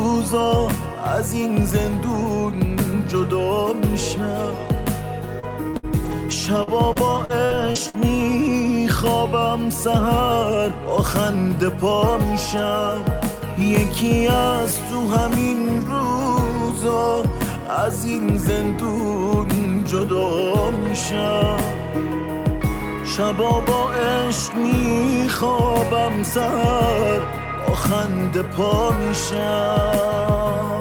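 From 5.39 to 7.95 s, the stream suffers repeated packet loss (robotic sound): data arrives missing or late again and again, and the receiver papers over each hole by stretching the last sound it had. The pattern suggests around nine separate dropouts, the longest about 58 ms, adding up to roughly a third of a second of missing audio, about 13% of that stretch. Each patch repeats stale material, so the audio turns choppy, with small pieces gone.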